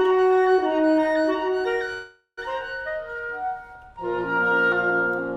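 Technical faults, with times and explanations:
1.93 to 2.39 s, call audio freeze: the last bit of sound stretches into a fading buzz, drops to about 120 ms of silence, then resumes exactly where it left off, nothing lost but everything after arrives roughly 440 ms late. Likely a packet stall that emptied the jitter buffer.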